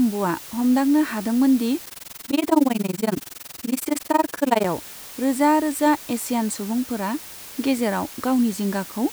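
From the start, the speech sits under a steady, even hiss with no distortion. That's low bit depth with dither, which fits about 6 bits, with noise roughly 20 dB down. Then from 1.86 to 4.68 s there's overlap-add ripple. The frames don't recombine at constant gain, so the level pumps at around 20 Hz, up to about 60 dB deep, giving a rough, fast flutter.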